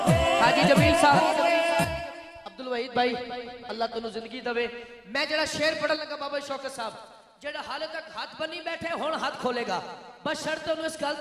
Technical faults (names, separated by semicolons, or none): one channel drops out